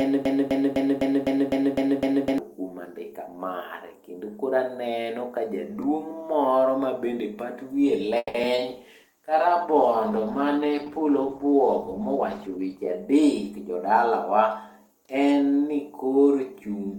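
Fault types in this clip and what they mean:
broken-record loop: From the very start until 2.38 s, one piece of sound about 0.25 s long repeats exactly, back to back, eight times, and it is already repeating when the clip opens. The rhythm is stuck and mechanical. This is likely a stalled player, encoder or stream that kept resending the last fragment it held. Whatever should have been heard during those seconds is gone.
call audio freeze: At 8.17 s the sound stops moving forward for about 0.19 s. The last sound is stretched into a fading buzz or hiss for about 170 ms, followed by a short silence of about 30 ms. Then the audio picks up exactly where it left off. This is likely held-up packets emptying the jitter buffer. No audio is lost, but the call now runs about 170 ms later than before.
short concealed packet loss: Just after the freeze, at 8.42 s and again at 8.56 s, there are two brief smears, each lasting a few hundredths of a second. 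About 20 ms of real audio never reached the decoder in time on each occasion. The receiver patched each hole by extending the preceding sound, then blended back into the real signal. The first patch leaves the timing a few milliseconds longer.
call bitrate drop: From 8.70 s to 13.53 s the sound becomes coarser and rougher, losing detail and clarity. The bandwidth estimate fell, and the encoder was told to drop from 32 kbps to 14 kbps. It stays at that lowest rate for about 4.1 s, until the bitrate recovers and the sound regains its finer detail.
jitter buffer speed-up: Between 12.15 s and 13.28 s, inside the low-bitrate stretch, the sound runs about 9% fast with its pitch unchanged, giving a hurried feel. The jitter buffer was holding more audio than its target, so the receiver cut many short pitch-period slices in a row to reduce the delay. Roughly a tenth of a second of audio is removed this way.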